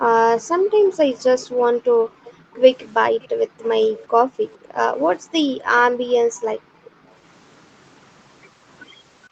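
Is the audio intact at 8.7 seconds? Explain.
Yes, the speech at 8.7 seconds is intact, with nothing beyond the normal band limit of the call path, which carries nothing above 8 kHz.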